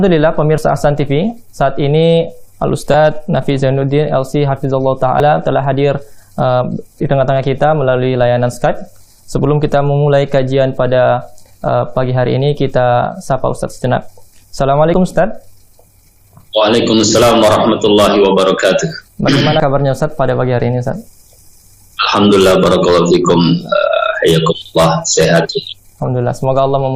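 Sudden jumps forward in the sound occur at 0.58, 2.94, 5.2, 14.94, 19.6 and 24.62 s. Each skips a few hundredths of a second, longer in the last three, with no gap. These are likely dropped buffers (overrun), where unread samples were overwritten.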